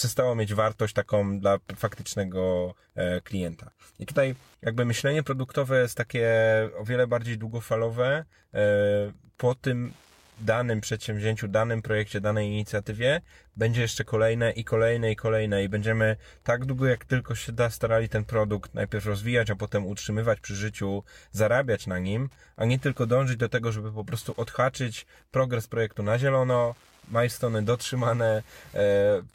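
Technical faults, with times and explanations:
Throughout, Wi-Fi interference: a faint, steady ticking runs under the speech about ten times a second, roughly 40 dB below it. The audio circuitry is picking up and rectifying a nearby Wi-Fi radio's beacon, sent every 102.4 ms, which turns each transmission into a click.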